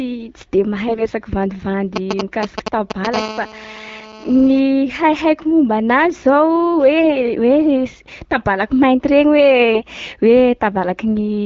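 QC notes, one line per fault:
0.88–1.08 s and 9.74–9.84 s, AMR bit errors: The speech briefly turns hoarse, scratchy and gargly, while pitch and loudness hold roughly steady. Flipped bits, a few percent of them, land in the less protected parts of the coded frames. The excitation pulses fall in wrong places, and the fine pitch, gain and spectral values go astray.
1.96–3.07 s, GSM signalling bursts: A galloping dit-dit-dit of short buzzes comes through, about as loud as the speech. A nearby 2G phone is sending short groups of radio bursts at 217 Hz while signalling. The audio circuit rectifies them into sound.
3.14–4.60 s, GSM phone buzz: A hard, raspy buzz at 217 Hz with many harmonics sits under the speech, about 13 dB below it, and has nothing to do with it. A nearby 2G phone in a call transmits a steady 217 Hz burst train. The circuitry demodulates this into the audio path.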